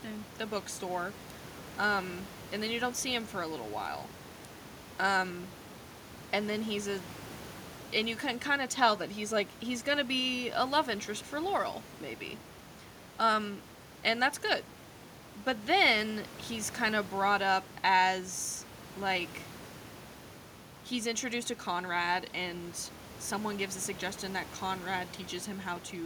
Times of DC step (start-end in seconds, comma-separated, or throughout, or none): none